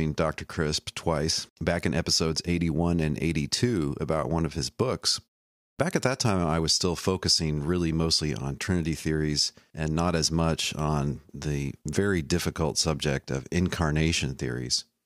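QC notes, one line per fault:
5.74–5.79 s, clipped start after a pause: after "one of his books" and a 0.54 s gap, the onset of "at that time I" is cut off abruptly, about 49 ms lost while the output wakes from silence.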